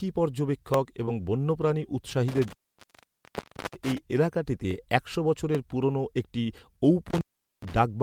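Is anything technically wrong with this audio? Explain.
Yes, there are four kinds of fault in this speech.

Dropped samples: single sharp clicks at 0.74 s, 4.71 s and 5.55 s, the last between "এলাকাটিতে একশো" and "পুরনো একটি". Each likely comes from under a millisecond of audio going missing, so the waveform jumps.

Short concealed packet loss: from 1.05 to 1.09 s about 20 ms never arrived, and the decoder extended the previous sound to cover it, giving a brief smeared wobble.

Lost packet rebuilt from error correction: right there, 1.07 to 1.09 s, one 20 ms packet was replayed from its low-bitrate backup copy, so that slice sounds rougher and noisier.

Intermittent contact: the sound cuts out from 2.28 to 3.98 s, with the line open for about 1.2 s before "এলাকাটিতে একশো", and again from 7.1 to 7.73 s, open for roughly 0.4 s. Both dropouts have crackle at the edges and faint hiss in between, typical of a loose plug or cable.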